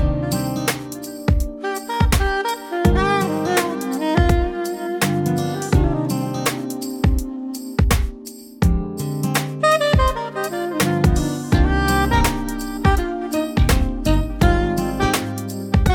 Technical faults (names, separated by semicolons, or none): none